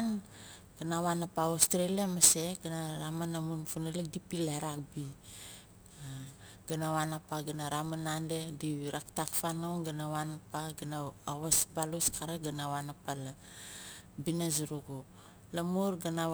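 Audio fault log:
Throughout, crude rate conversion: samples appear to have been dropped or repeated without filtering, which fits a 48 kHz to 44.1 kHz change, so the error pattern creates tones unrelated to the speech, a gritty inharmonic fizz roughly 15 dB below it, following louder and brighter sounds.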